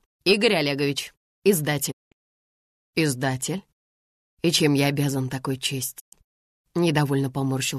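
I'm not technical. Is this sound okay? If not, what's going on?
No. There are two short digital broadcast dropouts, at 1.90 to 2.13 s and at 5.98 to 6.14 s. The receiver briefly lost the signal and went silent, so those moments are gone.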